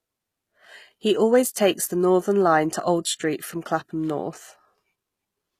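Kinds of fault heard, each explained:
HE-AAC compression, throughout the speech: the treble is bright but synthetic. The codec likely coded only the lower spectrum and rebuilt the upper band by copying lower bands upward under a coarse envelope. The rebuilt harmonics don't line up with the real ones above the crossover, so sibilants come out gritty, metallic or lisped. The damage is plainly audible, which fits a low bitrate of around 20 kbps.
Pre-echo, at 1.54 s: a short burst of hiss, about 19 ms long, runs ahead of a sharp attack and leaves its onset soft and smeared. The transform codec spreads quantisation noise evenly across each block. This attack falls late in its block, so noise scaled for the loud onset also fills the quiet moment before it, where nothing masks it.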